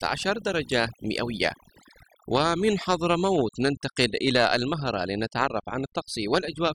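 Overdone noise removal runs through the whole recording: a noise reduction stage set too aggressively cuts individual frequency bands whenever they sit near its noise estimate, taking quieter parts of the voice too. The background drops and breaks up into twinkling specks.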